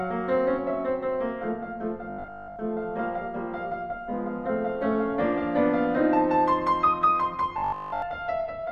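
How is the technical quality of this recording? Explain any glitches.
Two brief glitches mar the music. Robotic sound from repeated short buffers, 2.1 to 2.58 s and 7.58 to 8.02 s: likely starved playback looping a 20 ms slice, imposing a metallic 50 Hz buzz, partly at first, then completely.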